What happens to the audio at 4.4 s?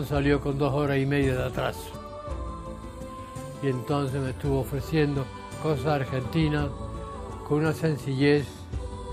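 Nothing goes wrong at 4.4 s: the audio plays through that moment intact, with no dropout, glitch or distortion.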